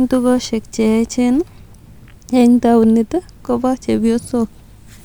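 No technical faults are audible.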